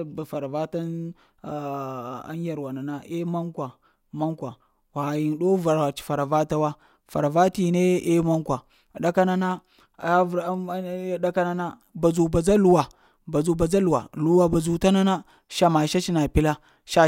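No technical faults can be heard.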